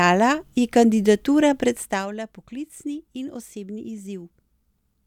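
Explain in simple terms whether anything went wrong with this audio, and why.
From 1.67 to 2.13 s, after "ji kandidatura", a fast ticking rides on the speech. This is zipper noise: the volume drops in small, unsmoothed jumps, about thirty per second.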